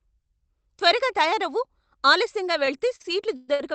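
From 2.65 s to 3.61 s, just after "త్వరగా తయారవు ఆలస్యంగా", the speech drags and stutters through six stalls. Sounds are held and smeared, the longest for about 118 ms, with roughly 0.28 s of stretched filler overall and nothing actually lost. These are repeated stalls (stutter): packets arrived late, the jitter buffer kept running dry, and the receiver extended the last sound until data resumed. The call path's band limit, near 8 kHz, applies throughout.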